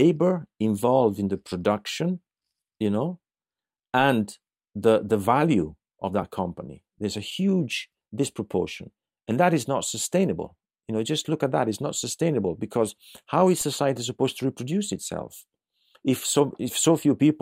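At 13.61 s a DC step occurs: the waveform's zero line abruptly shifts by about -35 dBFS, as happens when a converter recalibrates or an offset-carrying input is switched into the chain. The offset does not hold; it drains away at the rate of a 20 Hz high-pass filter downstream. The sudden jump is heard as a single low thump, while the speech continues unaffected.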